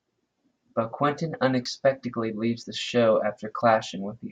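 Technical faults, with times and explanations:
0.68, 1.65, 2.63 and 3.61 s: audio missing between chunks. Brief skips of about 20 ms recur roughly every second, including just before "the show" and after "leaves the show", likely from a gap at each 1-second chunk boundary, with the two sides butted together.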